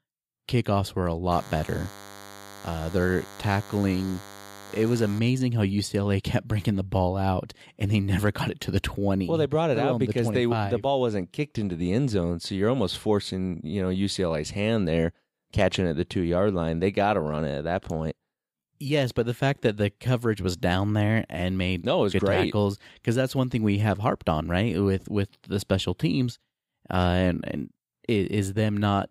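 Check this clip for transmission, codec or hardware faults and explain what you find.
There's one fault, a DECT cordless phone buzz from 1.31 to 5.19 s, starting right after "were a". A nearby DECT handset or base fires a radio burst every 10 ms, the audio circuitry rectifies it, and you get a thin, harmonic-rich 100 Hz buzz sitting roughly 20 dB under the speech.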